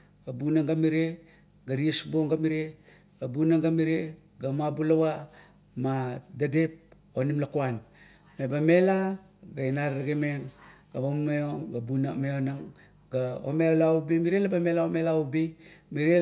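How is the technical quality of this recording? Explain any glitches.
No technical faults are audible anywhere in the recording, so there are no glitches to explain.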